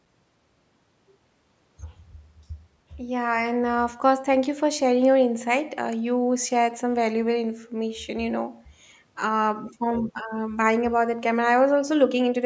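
No technical faults can be heard anywhere in the recording. The speech has passed through a call's microphone processing, so the lowest bass is trimmed away and nothing reaches above 8 kHz, which is how that path normally sounds.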